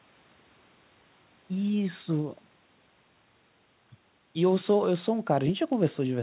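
No faults are audible in the speech; the band stops at 4 kHz, as expected for a call path carrying G.711 mu-law narrowband coding.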